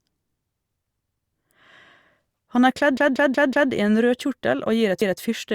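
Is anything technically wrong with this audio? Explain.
Yes, there are two repeated-buffer faults. From 2.97 to 3.72 s, just after "er kledd", the same 186 ms piece plays five times with hard joins. At 5.02 to 5.20 s it plays twice. The device replayed its last block, which fits an 8192-sample buffer, because new audio was late. Nothing seems lost afterwards, and the identical repeats set this apart from a dropout.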